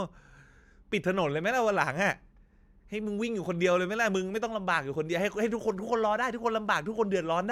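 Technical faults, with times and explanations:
No technical faults can be heard in this speech recording. There is nothing to list by time, since no dropout, glitch or distortion turns up anywhere in it.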